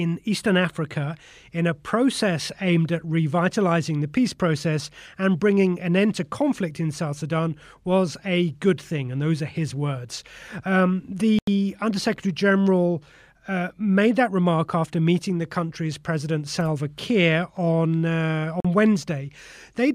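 At 11.39 s the sound drops to silence for about 87 ms, and at 18.60 s it cuts out again for about 44 ms. In both gaps the sound comes back further along, as if it had kept playing through the hole. This is likely a Bluetooth dropout: audio packets reached the headphones too late and were discarded, and the lengths fit roughly six and three lost packets.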